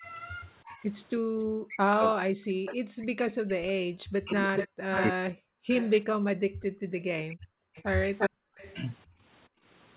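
From the start to 7.61 s the talker keeps dipping and breaking up, around 40 dB at the deepest and roughly three seconds all told. That's likely speech suppressed in double talk, with the echo canceller ducking everything while both ends talk.

From 1.2 to 1.35 s the room sound drops out by about 40 dB, which is background gated by the echo canceller clamping the mic during playback. It happens again across 6.48 to 9.65 s, in patches adding up to roughly a second.

Between 1.39 and 2.75 s a faint copy of the voice trails 320 ms behind, sitting around 15 dB down, most likely an echo leak from a loudspeaker end. From 4.28 to 8.76 s it returns at 395 ms delay and about as loud as the talker. Through all of it the audio is band-limited to 4 kHz by the G.711 call path.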